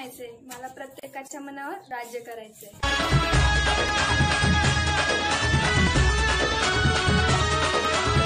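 Audio missing between chunks shows up as four brief skips at 1.91, 3.89, 5.87 and 7.85 s, spaced about 2 s apart. At each one a sliver of sound, around 20 ms, vanishes and the two sides butt straight together. The likely cause is a recorder or processor handling 2-second blocks and losing a moment at each handover. Unlike a dropout, there is no silent gap, and the strict regular spacing points away from random network loss.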